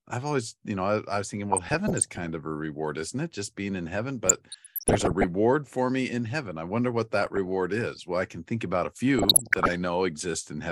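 Speech here picks up DAB burbling four times: 1.5 to 2.29 s after "I I was thinking", 4.26 to 5.25 s after "being in heaven", 7.18 to 7.54 s, and 9.18 to 9.76 s after "can think about a". Weak reception lets bit errors slip past error correction into the MP2 data, so corrupted samples put short noise blips in single sub-bands and corrupted scale factors make sub-bands jump in level for up to a frame. That gives the burbling over the voice, a bit denser in the last patch.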